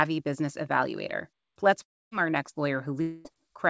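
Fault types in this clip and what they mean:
Long network dropout: likely a stretch of packets that never arrived. Around 1.82 to 2.13 s, just before "our next", the sound smears into a fading buzz and then goes quiet. Around 3.01 to 3.27 s, right after "our next", it's all buzz. Both times the audio picks up later with that bit gone.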